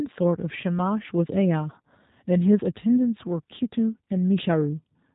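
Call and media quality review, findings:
G.729 codec damage, whole clip. Speech plainly rough and slightly synthetic. Nothing above 3.8 kHz. Probable component: VoIP encoder. Speech rebuilt from a vocal tract filter, pitch predictor and few pulses per frame, which fits an 8 kbit/s codec.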